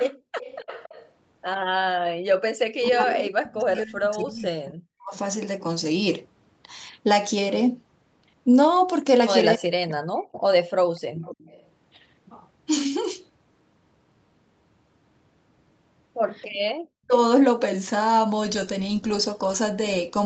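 It's a speech recording from a call, and the far end's loudspeaker audio leaks back in. From 0.0 to 1.11 s and again from 10.35 to 11.66 s you get a faint copy of the voice trailing about 277 ms behind, roughly 20 dB under the main speech. That's an echo leak, likely from the loudspeaker side's echo canceller not fully removing what its microphone picked up. Across 0.14 to 1.85 s the room sound also ducks, adding up to around a third of a second and dropping as much as about 40 dB. That's background gated by the echo canceller, which clamps the microphone while the loudspeaker plays and then lets go. The talker's own voice gets knocked down too, in patches between 2.74 and 5.14 s, between 9.55 and 10.3 s, and briefly around 17.06 to 17.14 s. The dips go about 40 dB deep in the longer stretches. That's speech suppressed in double talk, likely because both sides were talking and the canceller couldn't tell its talker from the echo, so it turned everything down. 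The top end stops around 8 kHz, which is just the Opus call path's normal bandwidth and isn't a fault.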